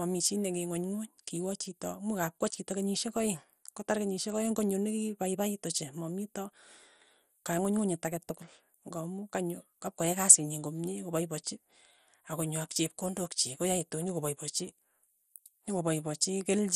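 MP2 compression damage runs through the whole speech recording, and it is plainly audible. The sound is dulled, with nothing above about 14.4 kHz. A gurgling, grainy distortion sits on the speech as upper bands drop in and out. The likely cause is MPEG Layer II coding at a low rate, which fits roughly 64 kbps. With so few bits across its 32 sub-bands, the encoder shuts off the top bands and quantises the remaining ones coarsely.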